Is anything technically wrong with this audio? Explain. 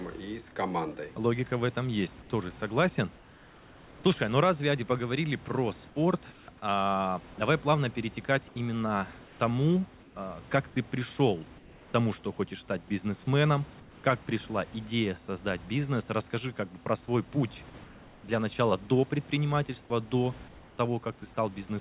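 Yes. Comfort noise in place of the background appears in seven speech pauses: 3.16–4.04 s, 5.88–6.48 s, 8.48–10.16 s, 11.58–11.94 s, 13.8–14.04 s, 17.84–18.24 s and 20.48–20.78 s. In each gap the room's natural background, sitting about 25 to 28 dB below the loud speech, gives way to a smooth, featureless hiss, in most gaps about 1 to 3 dB quieter, then the real texture returns with the next speech. The likely cause is discontinuous transmission: the sender stops sending audio during silence, and the receiver synthesises approximate noise to fill it. The audio is band-limited to 4 kHz, which fits a narrowband telephone codec such as G.711.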